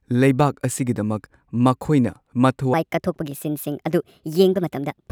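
From 2.74 s to the end, the speech abruptly turns higher and more hurried, its pitch lifting by about five semitones as it runs 1.39 times too fast. This section at the wrong speed was likely played against the wrong clock, which shifts speed and pitch together.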